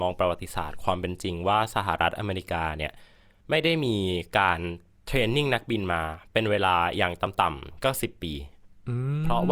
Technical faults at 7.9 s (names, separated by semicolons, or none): none